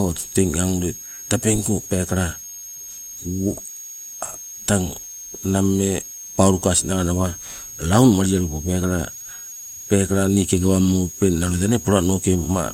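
Running under the speech from start to finish there's a switching supply whistle, a thin high tone sitting around 7 kHz and wandering between about 6.47 and 6.65 kHz. A switch-mode power supply has dropped into an audible burst mode, or two of them are beating, and that leaks into the signal path. It's only about 15 dB below the speech, with the pitch drifting within that range.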